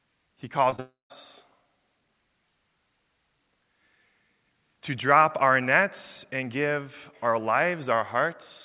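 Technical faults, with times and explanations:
0.70–0.74 s and 0.76–0.80 s, short concealed packet loss: two 20 ms gaps were bridged by repeating the preceding sound, leaving brief smeared wobbles. On a spectrogram the harmonics stretch flat and slightly blurred for each patch; the waveform shows repeated cycles where detail should vary.
0.80–1.12 s, long network dropout: about 0.3 s of audio is missing. The last sound continues as a fading buzz, then the final 150 ms is silent before the audio resumes further on, likely because packets stopped arriving. The waveform decays to a flat line, and the spectrogram is a fading smear, then blank.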